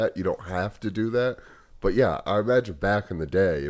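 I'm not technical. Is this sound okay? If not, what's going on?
Yes, nothing is wrong with it; it simply went through an ordinary call connection using the G.722 codec, which passes nothing above 8 kHz.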